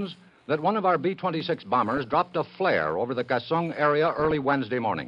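The whole clip sounds dull and a bit granular, with the top end thinned out and a gurgling texture riding on everything. That's most likely MP2 compression at a low rate: Layer II splits the audio into sub-bands and, when bits run short, drops the upper ones and quantises the rest coarsely, so the highs flicker and the remainder gets grainy. The damage is plainly audible, which fits something around 80 kbps. On top of that there are two bursts of DAB burbling, from 1.87 to 2.36 s and from 4.08 to 4.53 s, each about half a second of burbling over the sound. That's what happens when bit errors on a weak signal slip past the error correction and corrupt samples and scale factors, so individual sub-bands jump in level frame by frame. Each burst sounds like it's hitting about twenty frames, and the error rate behind it would be low, only a fraction of a percent.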